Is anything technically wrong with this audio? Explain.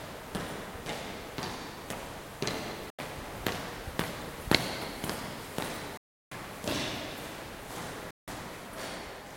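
Yes. The sound drops out abruptly three times, at 2.90–2.99 s, 5.97–6.32 s and 8.11–8.28 s. These are blocks of digital silence: runs of samples zeroed, probably unfilled buffers. The 85, 341 and 171 ms gaps fit 4096-, 16384- and 8192-sample blocks.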